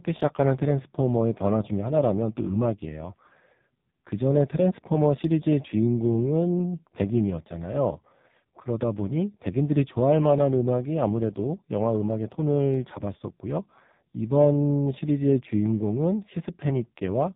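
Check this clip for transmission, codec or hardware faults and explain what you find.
The audio passes through the AMR narrowband mobile codec for its whole length. The signal is reduced to 8 kHz sampling, so nothing above 4 kHz survives and the speech sounds boxed-in and telephone-thin. Each 20 ms frame is rebuilt from a vocal-tract filter driven by only a few pulses, and here the damage is heavy. The buzzy, synthetic texture fits one of the lowest AMR-NB rates, around 5 kbps.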